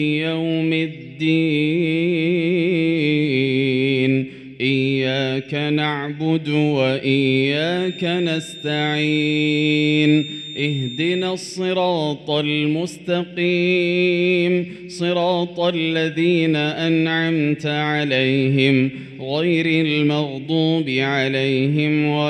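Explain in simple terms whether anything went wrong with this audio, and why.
From 7.69 to 11.41 s, a thin, steady whistle near 3.6 kHz sits quietly behind the sound and slowly swells and fades in loudness. This is a feedback whistle, likely from a loudspeaker leaking back into the microphone. Unlike a full feedback howl, it never builds up or screeches.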